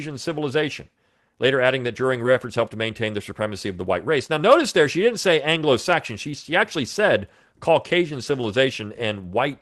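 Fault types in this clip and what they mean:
Skip ahead: At 2.25 s the playback jumps forward, dropping roughly a second of speech while later audio was already queued. Nothing fills the gap; the two sides of the cut are joined almost directly, so the speech lurches abruptly.
Jitter buffer speed-up: From 2.39 to 3.32 s the receiver, holding more audio than its target, trims short pitch-period pieces repeatedly. About a tenth of a second is removed, so speech runs at 111% speed with unchanged pitch and sounds hurried.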